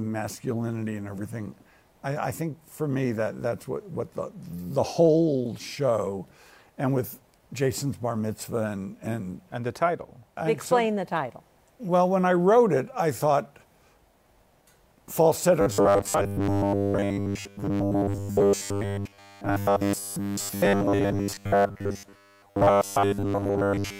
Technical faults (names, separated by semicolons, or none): robotic sound from repeated short buffers